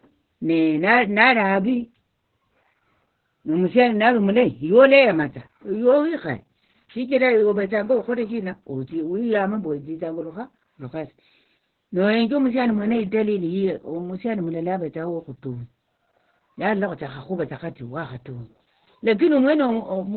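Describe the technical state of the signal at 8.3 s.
At 8.3 s the speech is passing through Opus voice compression for the whole clip, running its SILK linear-prediction coder at about 8 kbps in narrowband, so nothing above 4.2 kHz survives and the excitation is coarsely coded, leaving the voice muffled, hoarse and faintly robotic.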